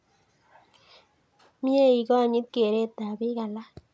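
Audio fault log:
Nothing goes wrong in this speech; it has simply passed through a call's microphone processing, which trims the lowest bass and leaves nothing above 8 kHz, and that's normal for a call.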